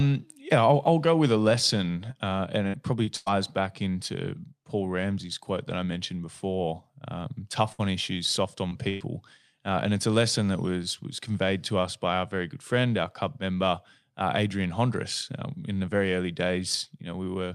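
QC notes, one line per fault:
2.11–3.28 s, repeated packet loss (robotic sound): four separate holes over this stretch, the longest 94 ms, about 220 ms missing in total, so roughly a fifth of the span is patched. Each gap gets filled by stretching the last bit of speech, and they come so close together that it turns choppy and robotic.
7.72–7.82 s and 8.89–9.03 s, burst of packet loss: a run of packets went missing, about 60 ms the first time and 120 ms the second. The receiver held the last sound and faded it, giving a brief buzz or hiss, then the speech picks up further on with that chunk gone.
7.79–7.81 s and 8.71–8.73 s, lost packet rebuilt from error correction: a single 20 ms packet each time was recovered from the low-bitrate backup copy carried in the next packet. So there's no gap, but those frames come through rougher and noisier than the audio around them.
8.69–8.74 s, short concealed packet loss: about 20 ms never arrived in time, and the receiver papered over it by continuing the previous sound and blending back in. 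It comes across as a quick smear or wobble, and right here it sits alongside the rebuilt 20 ms frame.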